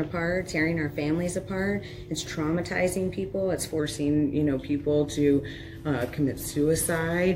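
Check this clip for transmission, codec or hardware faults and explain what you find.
One fault is present: a wrong sample rate from 3.79 s to the end. At that point the sound drops about 1.5 semitones in pitch (−1.47) and slows to 0.919 of its proper speed, which fits 48 kHz material played at 44.1 kHz without conversion. Because the samples simply come out more slowly, pitch and tempo sink together by the same ratio. A pitch-shift or time-stretch fault would move one without the other.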